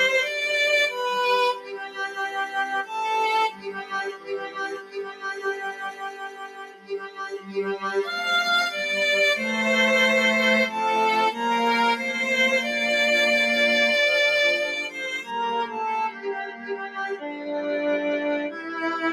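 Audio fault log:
Throughout: noise suppressor applied to music or sounds. A speech-oriented suppressor stays active and treats sustained tones, ambience and decays as noise, pulling them down by up to around 15 dB while attacks pass. The result is pumping, fluttering level and a thinned body.
1.54–2.55 s, 3.50–8.01 s, 16.10–17.47 s: sound cut by the noise suppressor. In these spans the suppressor judges held or fading material to be noise and ducks it, by up to about 13, 15 and 12 dB respectively. Tails sink and decays end early, while sudden onsets mostly survive.
15.31–19.12 s: de-emphasis applied wrongly. A treble cut meant to reverse pre-emphasis acts on audio that never had any, or is applied twice. The response tilts smoothly downward, sitting about 8 dB lower at 10 kHz than at 1 kHz, so this closing stretch sounds dull and muffled.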